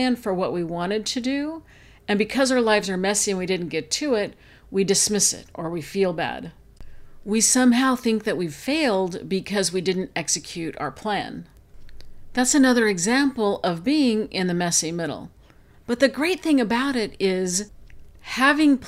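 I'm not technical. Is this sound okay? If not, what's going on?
Yes, it's fine: nothing in this recording stands out as a technical problem, so there's nothing you need to worry about.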